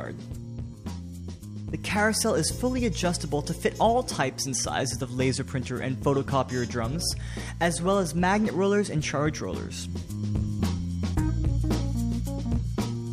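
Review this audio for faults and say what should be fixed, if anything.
No faults can be heard anywhere in the recording. Nothing needs to be fixed.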